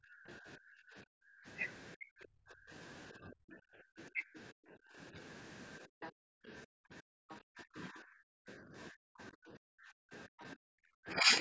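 From 0 to 1.46 s the background is gated by the echo canceller. The loudspeaker was playing, and the canceller pulled the microphone down by about 40 dB. The room sound drops out for around a second in total, then returns.

Between 1.97 and 5.18 s the talker's speech dips in pieces, for under a second in all. The drops reach roughly 40 dB. This is likely speech suppressed in double talk. Both sides spoke at once, and the canceller could not tell the talker from the echo. It turned both down.

The background gating returns from 5.87 to 6.75 s, for about half a second. Again it drops by about 40 dB.

From 6.01 to 7.36 s a second voice is faintly audible, some 20 dB below the talker. This is likely the other side's voice leaking through. The canceller left part of the loudspeaker signal in the microphone.

From 7.03 to 11.36 s the double-talk suppression comes back. The talker's speech is cut in places, for about a second overall. 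The deepest dips are again near 40 dB.

Within that stretch the background is gated twice more: from 8.28 to 8.62 s and from 10.27 to 10.68 s. Each lasts a fraction of a second and drops about 40 dB. A brief scrap of the other voice also leaks through from 10.40 to 10.45 s, around 30 dB down.

The call's microphone processing passes nothing above 8 kHz.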